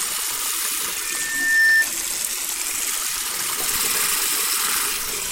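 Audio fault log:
0.92–1.89 s, loudspeaker feedback squeal: a 1.8 kHz tone swells over roughly 0.7 s to about 10 dB above the sound, as the mic re-amplifies its own loudspeaker.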